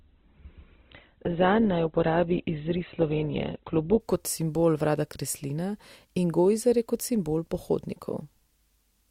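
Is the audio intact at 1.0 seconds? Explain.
No. At 1.0 s the clip is inside an adaptive stream starting at a low bitrate, lasting from 0.0 to 4.0 s. Nothing is heard above 4.1 kHz, and the codec artefacts are stronger, which fits a roughly 12 kbit/s Opus stream before the player switches to a higher-quality version.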